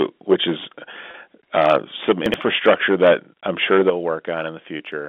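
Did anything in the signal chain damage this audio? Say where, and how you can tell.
Yes. Microphone overload appears at 0.01 to 0.03 s, 0.3 to 0.67 s, 1.54 to 3.14 s and 3.5 to 3.9 s, at the converter stage. Peaks flatten against the converter's limit, giving a harsh crackle on loud syllables. The likely cause is input gain driving the signal about 5 to 12 dB past the limit.

Packet loss with pitch repetition occurs at 1.11 to 1.14 s, in the network. About 30 ms of speech went missing, and the receiver filled the gap by repeating the last pitch period. That gives a brief held, buzzy tone before normal speech resumes.

Microphone volume stepped down at 2.11 s, 3.9 s and 4.92 s, in call processing. The level drops suddenly by about 2 dB, 9 dB and 2 dB. The likely cause is the software reacting to the clipping, which is why the largest step follows the overload ending at 3.9 s.

Chunks out of order occur at 2.26 to 2.34 s, at the buffer stage. 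A 20 ms chunk plays three chunks late. The sound jumps back and forth at the hard joins, though nothing is lost. It all sits inside the telephone-band G.711 coding.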